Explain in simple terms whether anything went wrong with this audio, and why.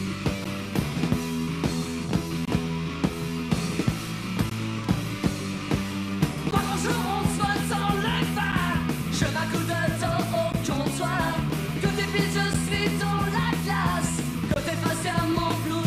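A gap between stream segments interrupts the sound eight times: at 0.44 s, 2.45 to 2.48 s, 4.50 s, 6.51 s, 8.52 s, 10.52 s, 12.53 s and 14.54 to 14.56 s. The audio arrives in two-second pieces, and the timing of each new piece starts slightly after the previous one ends. The player fills that leftover space with silence, so you hear a tiny hard-edged dropout of about 7 to 24 milliseconds every two seconds. No sound is actually missing.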